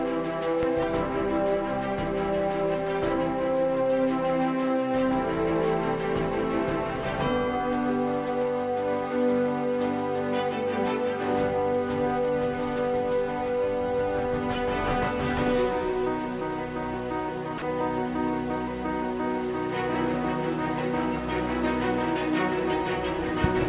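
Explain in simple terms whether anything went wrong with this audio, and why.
Two things go wrong.

There is a loud pop near the start: two sharp pops in quick succession between 0.63 and 0.85 s. Another, single pop comes at 23.44 to 23.47 s and stands out even more. Each time the sound carries on underneath. The likely cause is a sudden electrical jolt, such as a plug, a switch, static or a glitch in the audio hardware, which briefly kicks the signal before the circuitry settles again.

At 17.58 to 17.62 s, sound is dropped by the voice detector. For about 40 ms, a split second, the sound is replaced by a steady background hiss and then returns. This is likely because the sending side's detector mistook that moment for silence and stopped transmitting. The receiving end then filled the gap with artificial comfort noise.

The call line itself passes nothing above 4 kHz, so the very highest frequencies are missing throughout.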